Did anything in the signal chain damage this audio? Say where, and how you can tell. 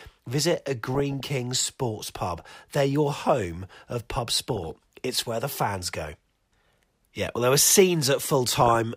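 Yes. Short blips of noise in single sub-bands break through the speech at 0.95 to 1.25 s, 4.50 to 4.76 s and 8.61 to 8.75 s. This is DAB burbling at the codec stage. Under weak reception, bit errors of a fraction of a percent slipped past error correction and corrupted MP2 sub-band data.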